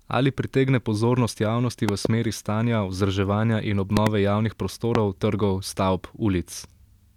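Speech clip with three loud pops, each peaking around 20 dB above the speech, which continues underneath: a double pop at 1.89 to 2.07 s, after "pritegne pozornost javnosti", another double pop at 3.97 to 4.09 s, after "stanja vzdrževanja in", and a single pop at 4.95 to 4.98 s. These are likely voltage spikes from a switch, connector or static discharge.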